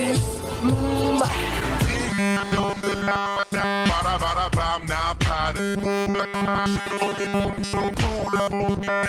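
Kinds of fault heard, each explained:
Robotic sound from repeated short buffers: a rigid 200 Hz buzz across 2.09 to 3.89, 5.57 to 7.94 and 8.19 s to the end, likely from the same 5 ms chunk being replayed over and over.
Short stall from a late packet: at 6.01 s the sound hangs for about 50 ms while the receiver waits, then carries on with nothing actually skipped.
Short concealed packet loss: right after, at 6.10 s, about 40 ms of audio goes missing and the receiver papers over it, leaving a brief smear.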